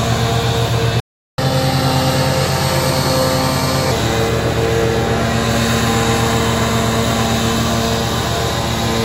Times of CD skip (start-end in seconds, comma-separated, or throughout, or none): none